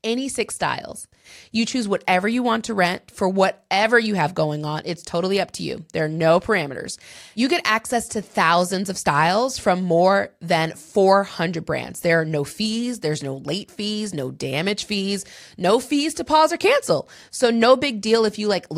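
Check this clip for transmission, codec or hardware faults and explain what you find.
I hear nothing wrong in this speech recording.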